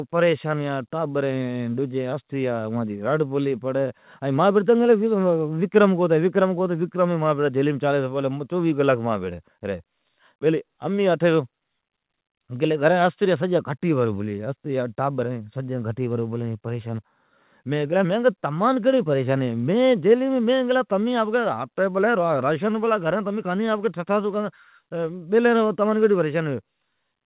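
No faults found in the speech; the 4 kHz band limit and faint level-tracking noise are what mu-law G.711 coding at 8 kHz normally leaves.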